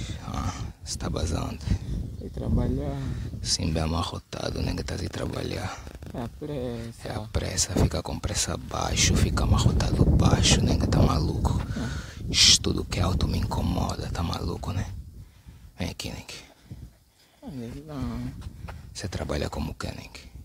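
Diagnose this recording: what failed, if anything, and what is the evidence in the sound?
Nothing in the signal chain has failed: the recording shows no interruption, distortion or level disturbance at any stage, from capture through to playback.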